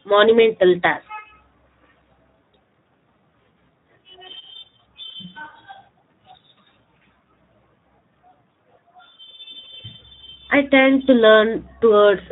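What you've got here is a speech recording that's been through the Speex codec for its whole length, and the damage is easy to hear. The voice comes across rough and grainy, with that buzzy, slightly synthetic edge CELP coding leaves when it's short of bits to rebuild the excitation signal underneath the vocal tract shape. The amount of degradation points to a fairly low setting, somewhere around 11 kbps, where the codec is clearly struggling to keep speech clean.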